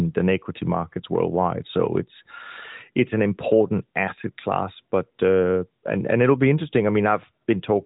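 Speech, with no technical fault to be heard anywhere in the recording. It comes through the AMR narrowband mobile codec, which leaves nothing above about 3.8 kHz and only a light coding texture consistent with its higher bitrate mode.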